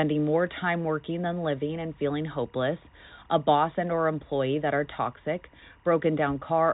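Timecode bleed runs throughout: 23.976 fps linear timecode leaks in around 40 dB down, a faint chirping warble near 1 and 2 kHz beneath the telephone-band speech.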